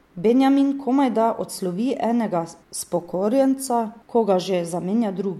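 No audible faults anywhere in the speech recording.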